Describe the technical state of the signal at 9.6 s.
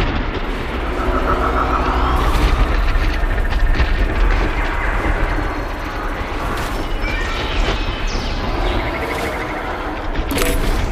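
At 9.6 s the signal is intact, with no dropout, distortion, glitch or other audible fault.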